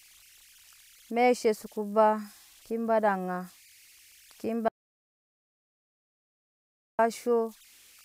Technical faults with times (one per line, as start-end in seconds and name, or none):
0.00-8.04 converter idle tones
4.68-6.99 audio dropout to silence